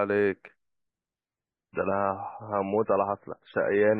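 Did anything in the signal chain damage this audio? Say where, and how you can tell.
Yes. The damage happens at the network stage, where an adaptive stream switched to a lower bitrate. At 1.26 s the speech suddenly loses everything above about 5.3 kHz and stays that way to the end, with more codec smearing and swirl, yet there is no gap or dropout at the switch. A dropout or packet loss would leave a hole, but this is an instant, seamless fall in quality. The sound fits MP3 dropping from roughly 128 to 16 kbit/s when the connection slowed.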